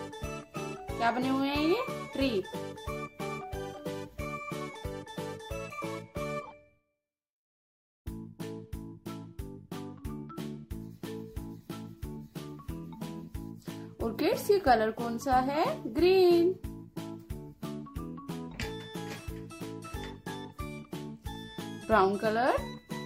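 No technical faults can be heard anywhere here.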